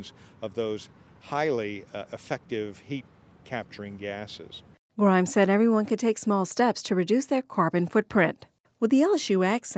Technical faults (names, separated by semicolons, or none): none